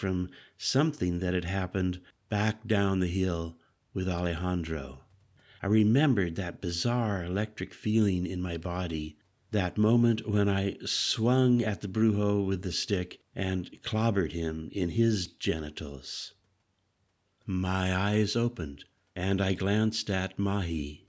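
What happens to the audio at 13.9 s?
Nothing goes wrong at 13.9 s: the speech continues intact through that moment, carried by the call's ordinary microphone processing.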